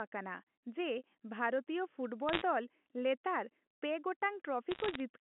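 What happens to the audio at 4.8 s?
From 4.71 to 5.0 s, bit errors on a digital phone line hit the G.711 mu-law signal. With a bit error rate under one percent, each flipped bit corrupts a single sample, and hits on sign or high-order bits produce sharp ticks, heard as a brief crackle over otherwise unchanged speech.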